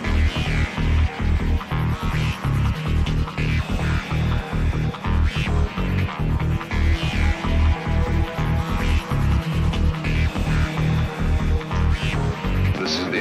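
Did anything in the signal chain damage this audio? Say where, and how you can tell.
Yes: a loud pop at 10.35 to 10.39 s, a single sharp thump about 10 dB above the sound, which carries on beneath it, likely a voltage spike in the analogue wiring.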